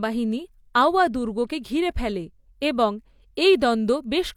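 Nothing in the speech recording stood out as a technical problem on listening.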